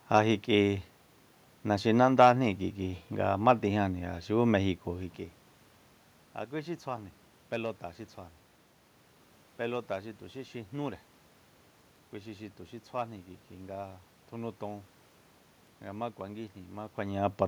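A speech recording with nothing technically wrong with it; the background room noise and the level changes around 5 s and again near the end come from the room and from the talker moving relative to the microphone, not from the system.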